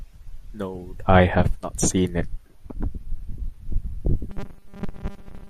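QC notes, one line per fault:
4.30–5.49 s, robotic sound from repeated short buffers: the speech suddenly locks into a stiff, metallic buzz at about 200 Hz through to the end, still loosely tracking the words. Likely the audio stopped arriving in time and playback kept looping a 5 ms slice to fill the gaps, skipping most of the real signal, so that fixed repeat rate is heard as the buzz.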